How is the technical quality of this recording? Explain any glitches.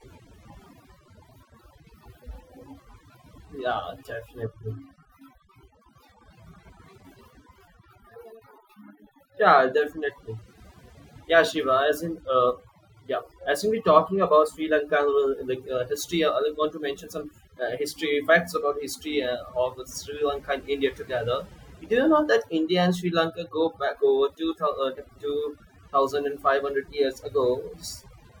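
The recording has one fault throughout: overdone noise removal. Aggressive noise reduction mutes frequency bands near its noise estimate, taking quiet speech detail too. Pauses fall to near silence with twinkling specks.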